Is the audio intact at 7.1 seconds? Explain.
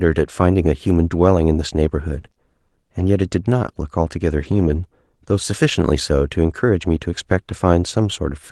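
Yes, at 7.1 seconds the speech is intact, with no fault at that moment.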